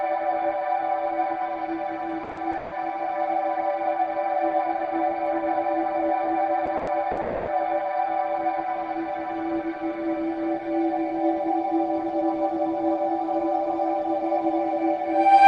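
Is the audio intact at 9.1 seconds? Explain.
Yes, the audio at 9.1 seconds is intact, with no dropout, click, distortion or other fault at that point.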